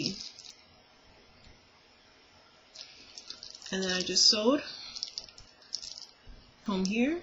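Three small forward jumps in the sound land at 0.5, 5.62 and 6.66 s, losing about 40, 20 and 40 ms. These are likely dropped buffers (overrun): samples were overwritten before being read, and the surviving audio was spliced together.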